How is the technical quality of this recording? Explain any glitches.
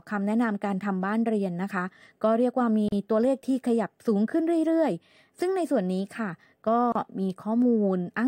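Two short dropouts interrupt the speech. At 2.88 s and 6.92 s, four seconds apart, there is a gap at a join of encoded pieces, lasting 38 ms and 32 ms. Each section was encoded separately and joined untrimmed, leaving encoder delay and padding. The speech cuts out with smeared edges, then resumes where it stopped.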